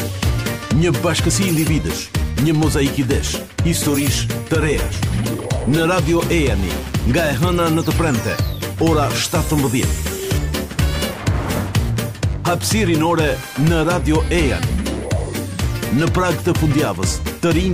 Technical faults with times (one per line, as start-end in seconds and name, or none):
none